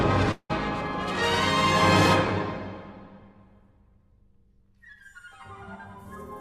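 From 0.31 to 0.51 s, a likely long network dropout: the last sound smears into a fading buzz for about 180 ms, then a brief silent gap, visible as blurred decaying bands before a blank column.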